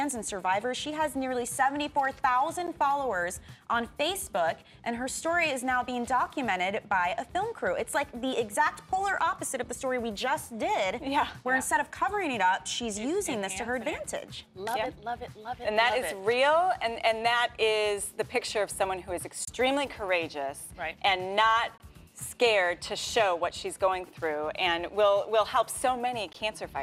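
Brief dropouts cut the sound at 2.67 s, 19.45 to 19.48 s, 21.78 to 21.80 s and 26.33 s, each 12 to 25 ms: gaps at joins of encoded pieces, where untrimmed encoder delay and padding left silence.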